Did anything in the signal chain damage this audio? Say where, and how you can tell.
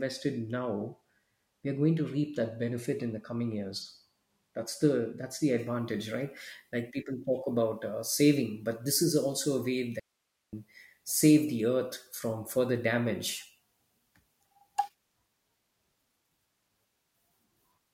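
Yes. From 5.59 s to the end the pre-emphasis is left on: the treble jumps to about 10 dB up at 10 kHz, fitting an FM 50 µs curve whose matching de-emphasis never got applied downstream.

There's also an audio dropout to a faint residue at 10.00 to 10.53 s: the signal vanishes abruptly, leaving just hiss far below speech level, likely an upstream analogue break with later stages still live.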